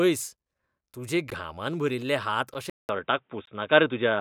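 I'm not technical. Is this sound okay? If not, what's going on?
No. There are two problems in this speech recording.

Blocks of digital silence at 1.30, 2.54 and 3.46 seconds: for 10 to 17 milliseconds each time, the audio drops to complete nothing and snaps back with no fade. You hear each one as a small tick or pop.

Input switched to a poorer device at 2.70 seconds: the sound likely changed over to a worse microphone. After a gap of about 0.19 seconds, it turns dull because nothing above 3.8 kHz gets through, the loudness shifts a little, and a faint new background noise appears.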